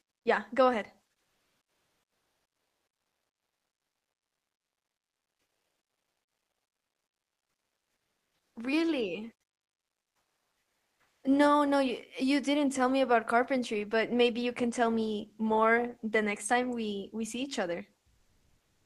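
From 1.21 to 8.55 s, 9.75 to 11.23 s, and 18.19 s to the end, comfort noise replaces the background. The real room tone gives way to a flat, featureless hiss: about 1 dB quieter, then about 10 dB quieter, then about 4 dB louder. The likely cause is Opus discontinuous transmission during pauses.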